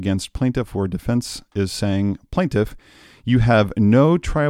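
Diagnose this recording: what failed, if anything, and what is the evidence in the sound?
Nothing in this recording failed, and the sound carries no evidence of a fault at any stage.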